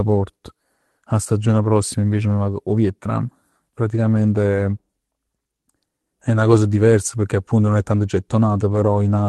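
No technical faults can be heard in the speech, which carries the ordinary coding character of a WebRTC call path, with the top end rolling off around 12 kHz in a way that fits an Opus stream at roughly 32 kbps.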